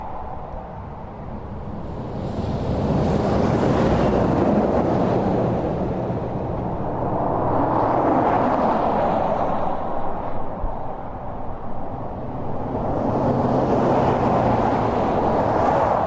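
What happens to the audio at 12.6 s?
Nothing goes wrong at 12.6 s; the sound carries on intact through that moment with no dropout, click or distortion.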